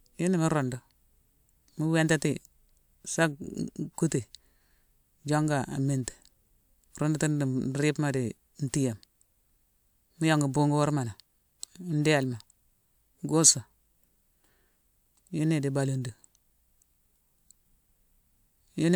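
The speech signal carries no audible technical faults at any point.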